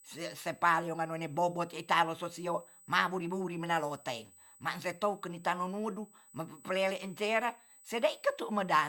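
A speech clip with USB whine throughout: a fixed-pitch tone at 8 kHz, roughly 30 dB below the speech, from 125-microsecond USB microframe current leaking through power or ground. On a spectrogram it forms a thin, unbroken horizontal line at 8 kHz across the whole clip.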